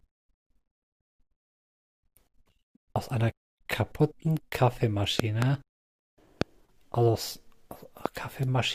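Loud pops land at 5.20 to 5.44 s (a quick pair), 6.42 s and 8.06 s, peaking roughly 15 to 20 dB above the speech, which continues beneath. Each sharp pulse is likely a voltage spike from a plug, switch, static or driver glitch.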